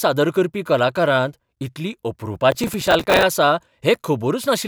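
From 2.52 to 3.23 s, a burst of processor overload crackle tears through the speech for about 0.7 s. The processor misses dozens of deadlines in quick succession for short buffers of a few milliseconds each, and every missed buffer is filled with stale audio that starts and ends on hard edges. Unlike clipping distortion, which follows loudness, this grit comes from timing: a dense crackle overlaying the speech that stops when the load clears.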